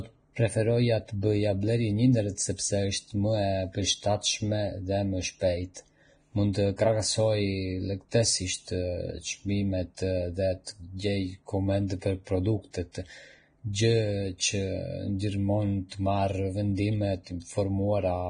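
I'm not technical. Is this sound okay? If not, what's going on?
No. Vorbis compression, throughout the recording: the speech sounds hissy and grainy, with nothing above about 9.7 kHz. Heavy data-saving compression is the likely cause. It discards the finest treble detail and replaces it with rough noise of similar loudness.

Pre-echo, at 5.74–5.76, 6.53, 10.64–10.67, 11.87–11.90 and 15.89–15.92 s: a brief hiss, lasting 17 to 32 milliseconds, comes just before sharp sounds. The compression spreads its noise across a short chunk of audio, so some of it leaks ahead of each sudden attack and blurs it.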